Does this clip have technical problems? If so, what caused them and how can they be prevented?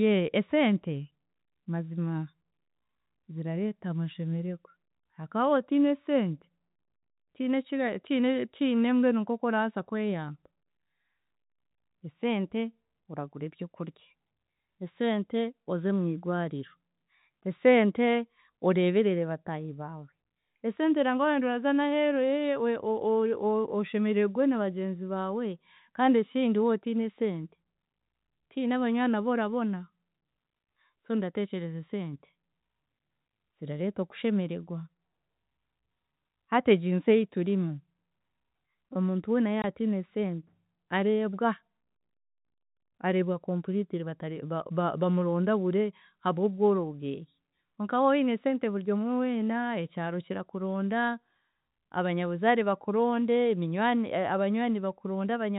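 Yes. Packet loss filled with silence: one packet went missing and the receiver substituted silence, leaving a 20 ms hole at 39.62–39.64 s in the band-limited telephone speech. Adding jitter buffering and packet loss concealment, or forward error correction, would mask such gaps.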